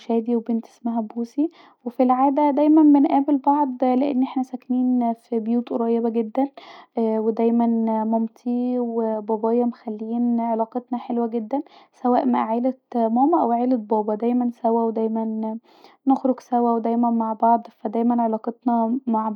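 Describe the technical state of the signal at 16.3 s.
At 16.3 s the signal is intact, with no audible fault present at that moment.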